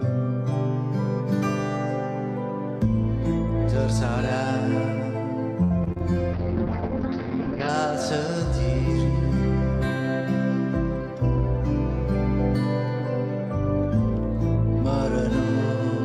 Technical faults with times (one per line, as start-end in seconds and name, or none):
5.63-6.15 repeated packet loss (robotic sound)
6.35-7.75 call bitrate drop